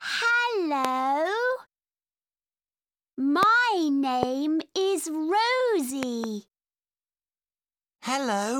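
A sudden voltage step, likely from a plug, switch, static discharge or driver glitch, enters the signal path four times, and the following circuitry turns each into a short pulse. The result is a loud pop. The first, from 0.85 to 0.87 s, stands roughly 20 dB above the sound. Single pops follow at 3.43 to 3.45 s and 4.23 to 4.25 s, each around 15 dB up. Between 6.03 and 6.26 s, two pops land in quick succession at a similar level. The sound continues underneath each one.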